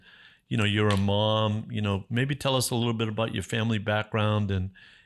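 Nothing in the speech signal points to a technical fault at any moment: level, timing and continuity hold steady throughout.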